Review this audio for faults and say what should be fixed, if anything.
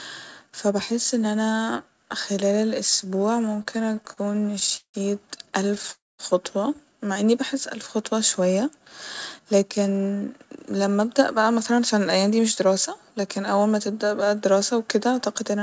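Repeated stalls (stutter) occur from 3.56 to 4.96 s and again from 5.68 to 5.90 s. In the first stretch the speech halts about 20 times, and roughly 0.4 s of continued sound fills the gaps, the longest 170 ms. The second stretch has five brief hitches of up to 10 ms. Packets reached the receiver more slowly than playback consumed them, so the jitter buffer kept emptying and the last sound was stretched until more arrived. Nothing is lost, but the speech drags. Unlike a single freeze, the interruptions are many and short, giving a stuttering rhythm rather than one hole. Prevent this by letting the jitter buffer grow its target delay when arrival timing becomes irregular.

A call audio freeze follows at 5.92 to 6.21 s. The last sound is carried on briefly, then about 210 ms of silence follows before speech resumes from where it stopped, which adds a 264 ms gap. The likely cause is a single hold-up of packets in transit that drained the buffer completely. 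What sets it apart from the stutter is that it is one continuous stop that fades to silence, not a chain of tiny repeats. Prevent this by fixing the network hop that delays packets in bursts, or by allowing more buffering headroom.

A jitter buffer speed-up runs from 9.39 to 12.68 s. The speech plays at about 108% of normal speed with its pitch unchanged, and roughly 0.3 s of audio is shaved away in small pitch-period slices. This is the receiver shedding excess delay after delayed packets arrived together. A pitch shift would move the voice up, but here only the pace changes, so the speech sounds hurried rather than higher. Prevent this by smoothing delay recovery so the buffer drains more gently, or by avoiding the bursty arrivals that overfill it.

The G.722 call path at 64 kbps carries the audio, with nothing above 8 kHz.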